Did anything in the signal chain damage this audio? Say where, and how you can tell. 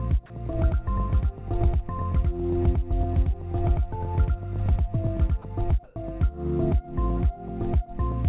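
Yes. Between 0.35 s and 5.39 s a second full-band copy of the audio is mixed in, most likely because the signal was captured twice, once through a slower path, or because an edit left two copies out of step. This doubled audio track sits about a tenth of a second behind the original at roughly the same level. It has no decay or room colour, so it sounds like a flat slapback, and it switches on and off abruptly at those two points.

At 5.84 s the call processing stage cut the sound. The sender's voice detector most likely mistook part of it for background and stopped transmitting, so the receiver filled the gap with comfort noise. This sound dropped by the voice detector lasts 120 ms, until 5.96 s, and about 50 ms of real sound is lost. The audio gives way to steady, featureless noise and returns when the detector triggers again. The narrowband call codec's cut above 4 kHz runs through the whole clip.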